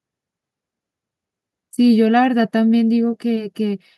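No technical faults turn up anywhere in this speech recording, so there's nothing to flag from beginning to end.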